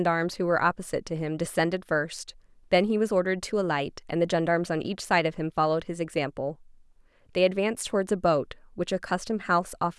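A speech recording with no technical fault to report. Nothing goes wrong at any point, so there are no times or causes to give.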